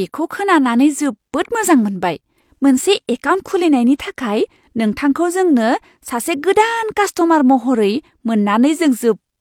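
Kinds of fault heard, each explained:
No technical fault can be heard in this speech recording.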